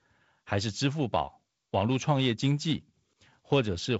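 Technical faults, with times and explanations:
Nothing stood out on listening to this speech clip, which comes across as ordinary wideband telephone audio with its highest content stopping short of about 7.7 kHz.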